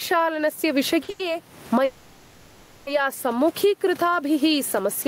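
Throughout the clip there is gain pumping. The room noise sits about 34 dB below the speech, while the gain swings by roughly 20 dB, pulling loud and soft parts closer in level and squashing the sound. The likely cause is gain set far too high, with a fast limiter clamping it. That swinging gain separates it from steady room noise.

At 1.03 s and again from 1.10 to 1.33 s come short stalls from late packets. The jitter buffer ran dry, and the last sound was held for 50 ms and then 90 ms, with a slight buzz or dip, before carrying on with nothing lost. They are brief and don't fade, which separates them from a freeze.

From 1.85 to 2.89 s there is a call audio freeze. For about a second the last sound is drawn out into a buzz or hiss that fades but never reaches silence, likely because packets were held up and the buffer emptied. The audio then resumes where it stopped, inserting a gap rather than losing anything.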